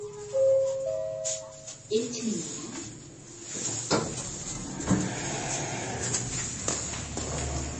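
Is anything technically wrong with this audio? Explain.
Yes. Throughout, heavy MP3 compression is the likely cause: the encoder starved weak frequency lines and dropped everything above 8.3 kHz, leaving watery, swirly, dull sound, consistent with roughly 31 kbps.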